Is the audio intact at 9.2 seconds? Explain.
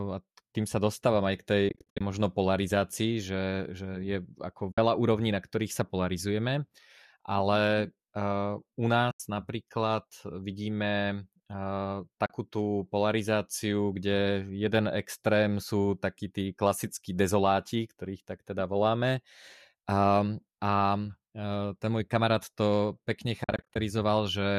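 No. From 9.11 to 9.20 s the speech fades out into a short silent gap of about 90 ms and fades back in with soft edges. This is AAC frame loss with muting. A run of compressed frames went missing, about nine by the length of the gap, and the decoder filled each one with a zeroed spectrum. The overlapping windows on either side produce the gentle fade out and in rather than a hard cut.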